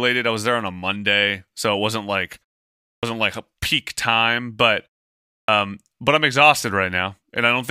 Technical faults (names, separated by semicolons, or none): clipped start after a pause